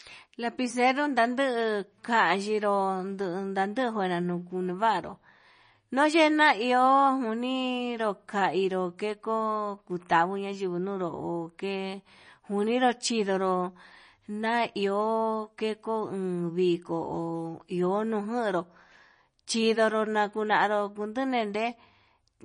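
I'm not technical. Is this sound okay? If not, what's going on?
No. Throughout, the speech sounds watery and swirly with nothing above 9.8 kHz, which points to likely MP3 compression rather than plain muffling, which wouldn't swirl.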